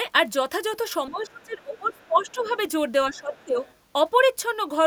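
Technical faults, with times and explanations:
1.09 to 2.5 s, 3.1 to 3.59 s: speech suppressed in double talk. The talker dips, by roughly 20 dB then 15 dB, most likely an echo canceller ducking both overlapping voices.
1.74 to 1.79 s, 1.96 to 2.5 s, 3.34 to 3.44 s, 3.61 to 3.74 s: other side's voice leaking through. Faint scraps of a second voice sit well below the talker, likely residual loudspeaker echo left uncancelled.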